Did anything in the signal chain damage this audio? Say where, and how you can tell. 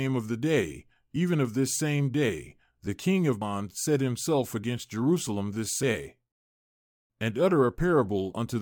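Yes: damaged data in a compressed stream at 3.42 s in the codec stage. Corrupted frames make the decoder lose sync, leaving a brief glitch in the speech.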